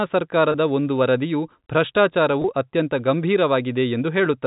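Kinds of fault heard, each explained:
Packet loss with pitch repetition, 0.52 s and 2.42 s: each 20 ms gap is bridged by repeating the last pitch period, heard as a brief buzzy hold.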